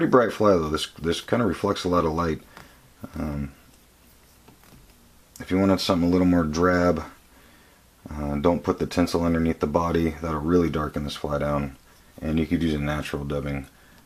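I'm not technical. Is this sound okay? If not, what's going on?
Yes, nothing wrong with it: no faults to report anywhere in the clip.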